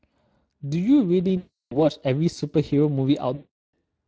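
Speex codec damage runs through the whole speech clip. It is plainly audible. The voice has a noisy, hoarse grain. This comes from a CELP coder spending too few bits on the excitation signal. The character points to a middle setting near 20 kbps. The coder rebuilds each sound from a filter and a coarse excitation. The fine detail between harmonics is lost, and a rough texture replaces it.

From 1.37 to 1.77 s, VoIP packet loss concealed by the speech codec cuts in. About 340 ms of audio is missing, which fits roughly 17 lost 20 ms frames. The decoder repeats its last pitch and filter and lowers the gain each frame. The sound smears into a stretched, fading sound.

From 3.35 to 3.75 s, the same concealment fault returns. This time about 380 ms is lost, roughly 19 frames. Again a stretched sound fades away where the speech should be.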